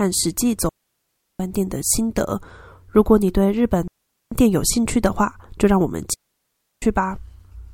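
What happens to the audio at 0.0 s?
Nothing goes wrong at 0.0 s; the audio is intact there with no audible fault.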